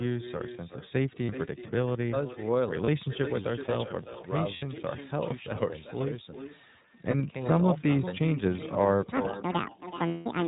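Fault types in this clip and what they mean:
Echo with no canceller: The far end's loudspeaker output is picked up by its microphone and returned without cancellation, so each phrase is followed by a fainter, thinner copy. The copy sits about 12 dB below the speech and arrives around 0.4 s late, roughly one network round trip. That lag is long enough to hear as a separate trailing repeat rather than added room colour, and it persists through the whole clip.
iLBC codec: The speech passes through iLBC, a narrowband VoIP codec that encodes each frame's excitation independently of the previous frame. The frame length is 30 ms, consistent with its 13.33 kbps mode. Nothing above 4 kHz survives, so sibilants and upper harmonics are missing, and the codec's damage is plainly audible as a rough, slightly synthetic grain on the speech for the entire length of the clip.
Lost iLBC frames: Missing packets leave gaps that the decoder fills by repeating the last pitch cycle blended with noise, which sounds like a briefly held, buzzy or breathy vowel. 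There are short gaps of 30 ms at 1.26 s, 2.84 s and 7.1 s, each consistent with a single lost 30 ms frame. A 60 ms gap at 4.56 s points to two frames. The longest gap, 180 ms at 10.08 s, fades as the concealment runs on. Because each frame decodes independently, normal speech resumes almost immediately after every gap.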